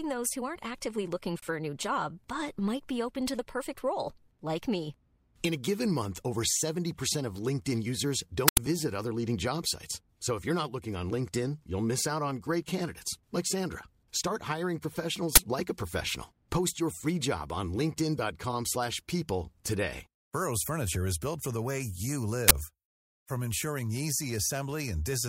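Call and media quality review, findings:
Uninitialised buffer, 8.48–8.57 s, just before "visit other leading job": about 92 ms burst of digital noise, consistent with a 4096-sample block. Playback pulled the block before audio was written, outputting leftover memory as samples. Recurs at 15.36–15.38 s, before "like a professional", and 22.48–22.51 s, after "for the way you": shorter 23 ms bursts fitting a 1024-sample block. Probable component is the output buffer handoff or render callback timing.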